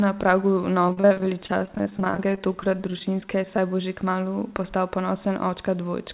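From 0.88 to 3.58 s, between "na pragu" and "bo že kmalu", repeated packet loss gives robotic, choppy speech: frequent dropouts up to 43 ms are patched by stretching the preceding sound, over a band that stops at 4 kHz.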